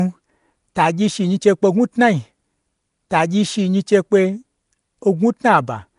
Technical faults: Nellymoser compression

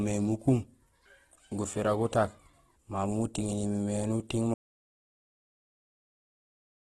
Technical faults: Opus compression; audio dropout to silence

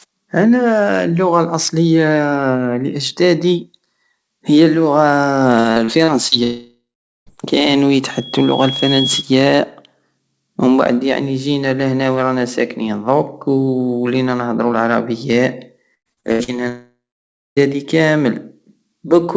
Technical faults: repeated packet loss (robotic sound); long network dropout; loudspeaker feedback squeal

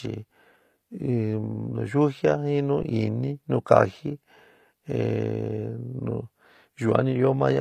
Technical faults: low-bitrate audio saved at a high bitrate; underrun with held sample

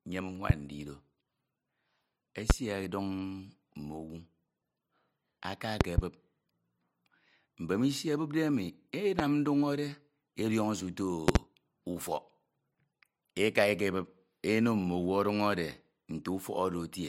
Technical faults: loud pop

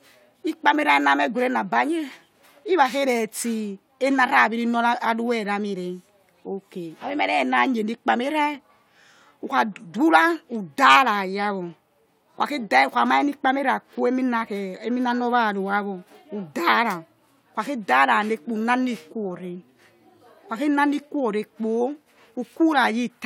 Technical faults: none

